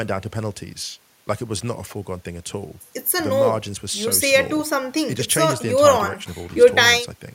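No technical faults can be heard anywhere in the speech recording; the signal stays steady and continuous throughout.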